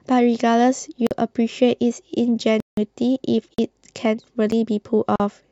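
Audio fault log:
1.07–1.11 s, 2.60–2.77 s, 3.54–3.58 s and 4.51 s: block of digital silence. The output buffer likely went unfilled in time, so the sound dropped straight to silence with no fade. The 43 ms gaps fit a 2048-sample buffer, and the 171 ms gap fits four times that, so these are heard as short holes. The 9 ms gap is only a tick.
5.16–5.20 s: Bluetooth stall. Interference likely held packets up until the headphones' buffer ran dry, pausing playback for 41 ms. The sound cuts hard to silence and then resumes, so it is heard as a brief dropout near the end.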